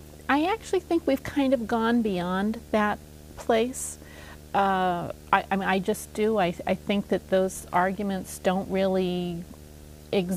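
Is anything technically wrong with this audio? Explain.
Yes. A steady buzz at 75 Hz, with a layer of fine hash above it, runs under the whole clip at about 20 dB below the sound. This is video or display buzz: a screen or its cable is coupling into the audio path at its 75 Hz field rate.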